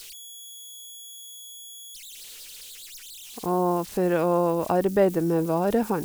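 From start to end, converter idle tones sit under the speech near 3 kHz, about 21 dB below the signal. An undithered delta-sigma converter locks into repeating bit patterns at low levels, so unlike steady hum, the tone shifts pitch with offset and turns grainy beneath quiet passages.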